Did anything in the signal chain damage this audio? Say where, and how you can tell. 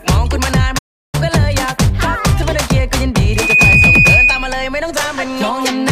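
Yes. A playback stall cuts the sound from 0.78 to 1.15 s, a gap of about 349 ms, before it resumes. This is likely a starved or blocked player buffer.

A loudspeaker feedback squeal appears at 3.26 s as a 2.5 kHz tone. It swells over roughly a third of a second to about 5 dB above the signal and lasts until 4.62 s. The microphone is picking up its own loudspeaker, and the acoustic loop's gain exceeds unity at that frequency.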